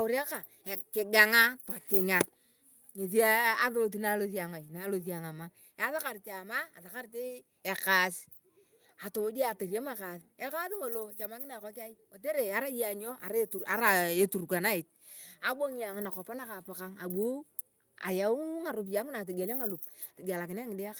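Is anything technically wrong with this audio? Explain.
No, nothing is technically wrong with this audio.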